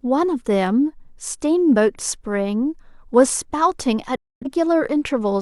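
At 4.16 s the speech drops out in a digital broadcast dropout. The receiver muted over lost frames, fading in 3 ms. Sound returns at 4.47 s.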